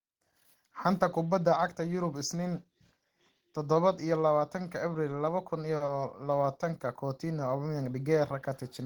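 A speech recording with two closely spaced network faults. At 5.76 to 5.81 s there is a short stall from a late packet: the jitter buffer ran dry, so the receiver held the last sound for about 40 ms until the packet turned up, then resumed where it left off. Nothing is lost, but that sound is drawn out with a faint buzz or dip, and the playout delay grows by 40 ms. Immediately after, at 5.85 to 5.89 s, comes a short concealed packet loss: 30 ms of audio never arrived, and the decoder bridged the gap by extending the preceding sound before blending back into the real signal. This is heard as a brief smear or wobble, and a short consonant in that span may be missing.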